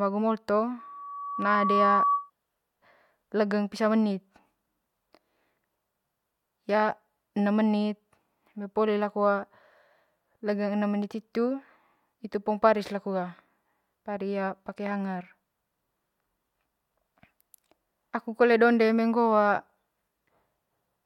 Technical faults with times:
0.78-2.30 loudspeaker feedback squeal

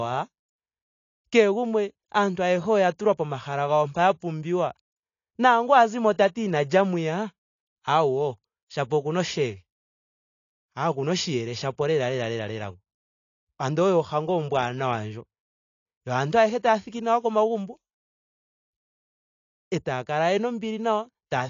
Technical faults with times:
0.00-21.50 AAC compression

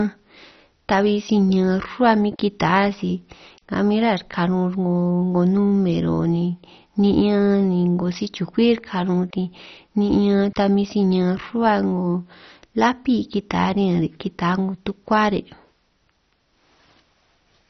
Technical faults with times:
0.00-17.70 MP2 compression

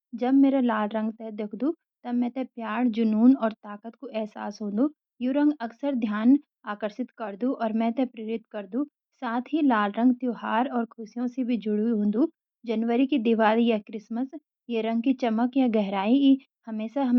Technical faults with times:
none

